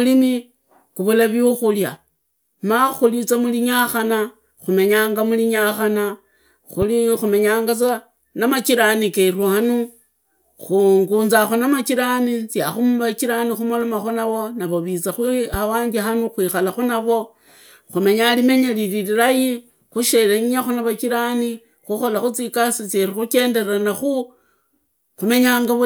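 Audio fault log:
6.82–6.85 s and 15.54–15.57 s, loud pop: two separate single pops, each around 30 ms, sitting a few dB above the speech level, and the talking carries straight on underneath each one. That sharp, thumpy character is what you get when a sudden voltage step or spike is added on top of the signal, most likely from a connector, a switch or a bit of static. The downstream circuitry rounds it into a brief pulse rather than a clean click.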